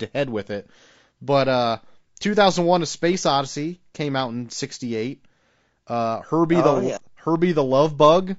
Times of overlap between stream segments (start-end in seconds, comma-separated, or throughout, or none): none